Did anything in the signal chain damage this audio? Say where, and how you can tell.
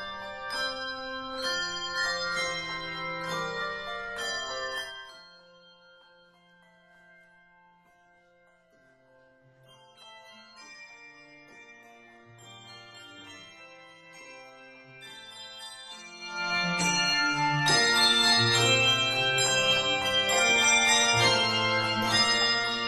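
Yes, zipper noise from a gain stage stepping once per buffer. From 4.74 to 5.24 s the level drops about 20 dB, and from 16.14 to 16.56 s it climbs back, both in 1 dB jumps roughly 50 times a second. Each jump leaves a tiny click, so you hear a zipping tick.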